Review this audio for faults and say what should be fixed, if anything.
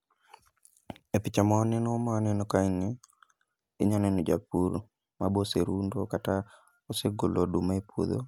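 Nothing needs fixing: the speech signal holds steady throughout, with no audible technical faults anywhere in the recording.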